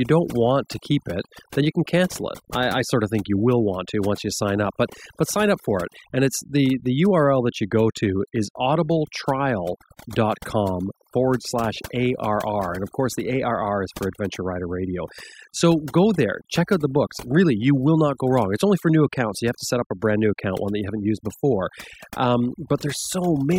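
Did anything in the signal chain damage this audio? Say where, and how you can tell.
Yes. The damage comes from overdone noise removal in the processing stage, and it runs through the whole speech clip. Between phrases the background drops to near silence, dotted with twinkling specks. A suppressor set far too strong is cutting individual frequency bands whenever their level sits close to its noise estimate. Quiet parts of the speech fall below that line and are removed along with the noise.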